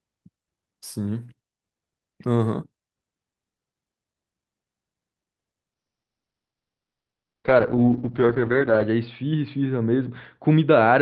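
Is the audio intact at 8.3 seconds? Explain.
No. At 8.3 s the audio is inside a call bitrate drop that runs from 5.75 s to the end: the encoder falls from 48 to 7 kbps and bandwidth narrows to 6 kHz, so speech sounds muffled and rough-watery, with no gaps as packet loss would leave.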